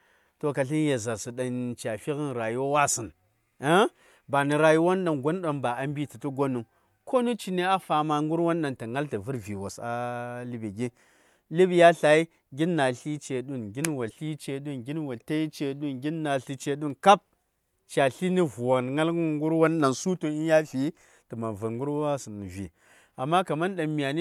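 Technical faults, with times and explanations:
14.07–14.11 s, damaged data in a compressed stream: a short glitch cuts across the speech for about 44 ms. Part of the encoded data here is corrupt. Bytes may have been lost, zeroed or overwritten. The decoder misreads those frames and loses its place. It then scans forward for the next valid frame header. The garbled output before it locks on again is what is heard as the glitch.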